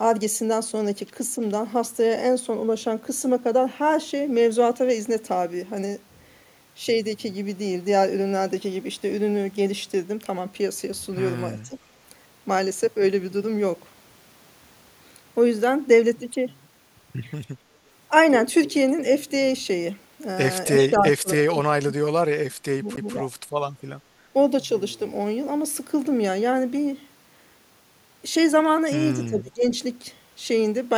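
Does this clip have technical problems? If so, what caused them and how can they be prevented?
Yes. The speech dips three times in a way that points to speech suppressed in double talk. The likely cause is an echo canceller that could not tell the near talker from the far side's loudspeaker echo, so it attenuated both. The first dip runs from 11.5 to 11.75 s and drops about 10 dB. The longest runs from 20.69 to 23.34 s, losing around two seconds of level and sinking by about 30 dB at its deepest. The last runs from 29.19 to 29.64 s and drops about 20 dB. On a waveform the envelope pinches in; on a spectrogram the upper bands thin out or leave gaps while lower energy partly remains. Keeping the far-end loudspeaker level and room echo low, and using a canceller with reliable double-talk detection, prevents this.

A CD skip occurs at 22.96 s, inside the longest dip. There is a tiny mute of roughly 10 ms, then a tick and an abrupt jump in where the speech resumes, as the laser landed on another turn of the disc's spiral. 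A spectrogram shows a thin vertical broadband stripe with harmonic traces breaking off and restarting out of line, and the waveform shows a brief near-flat gap with a step discontinuity. Cleaning the disc, shielding the player from knocks, and capturing with an error-checked secure rip prevents it.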